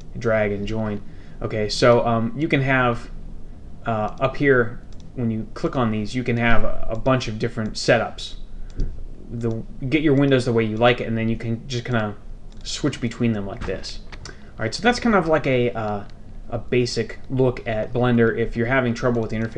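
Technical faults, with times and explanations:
Nothing technical goes wrong anywhere in the recording, so there's nothing to flag here.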